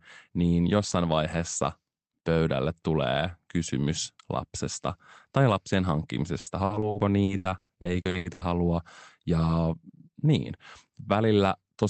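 Repeated packet loss (robotic sound) runs from 6.39 to 8.44 s of this speech, where more than a dozen short holes follow one another in quick succession, the longest about 120 ms. Each gap is patched by stretching out the sound just before it, so over a third of that stretch is concealment rather than real audio. The result is choppy, with pieces missing, heard through the call path's roughly 8 kHz bandwidth.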